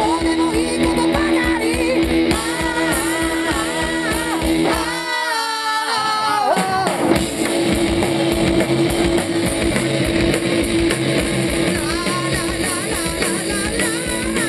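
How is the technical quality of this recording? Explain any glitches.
No glitches or technical faults can be heard here.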